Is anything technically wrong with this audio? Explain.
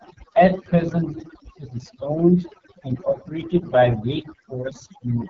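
Yes, there are two problems running the whole way through this speech clip. First, overdone noise removal: the noise reducer was set too aggressive, switching off frequency bands near its noise estimate, so the background drops and breaks up into twinkly specks. Second, the AMR wideband (HD Voice) codec is doing heavy damage. The rough, raspy sound fits its lowest 6.6 kbit/s mode, where the speech model struggles, and nothing comes through above 7.6 kHz.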